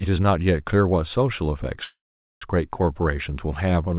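From 1.84 to 2.44 s a call audio freeze, likely from late packets, fills about 0.58 s with a fading buzz, then silence, before the speech resumes where it stopped, with nothing lost, unlike a dropout.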